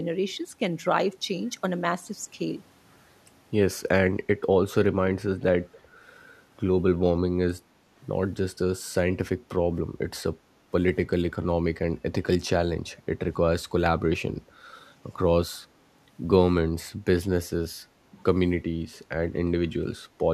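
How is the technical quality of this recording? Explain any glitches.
One fault stands out: a brief echo leak from 5.72 to 5.81 s. The likely cause is a far-end loudspeaker whose echo canceller let part of what its microphone picked up slip through and return down the line. The result is a faint, delayed copy of the speech, trailing it by 281 ms and sitting roughly 30 dB below it. It surfaces as a short ghost lasting under a tenth of a second.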